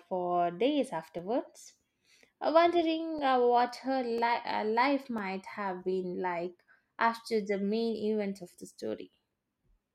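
From 1.19 s to 5.18 s, periodic USB or driver dropouts blank a couple of milliseconds every second, producing about five evenly spaced ticks in the speech.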